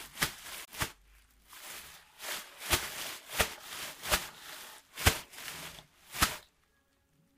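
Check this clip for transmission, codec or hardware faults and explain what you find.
One fault turns up. A Bluetooth stall at 0.65 to 0.68 s, likely from interference delaying packets until the headphone buffer emptied, cuts the sound to about 28 ms of silence before it resumes.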